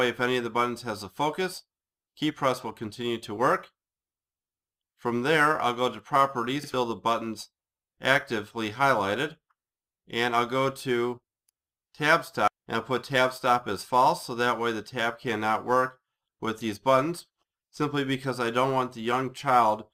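Throughout, crude rate conversion repeated samples without filtering, which fits a 44.1 kHz to 48 kHz change, adding gritty inharmonic fizz roughly 25 dB below the sound.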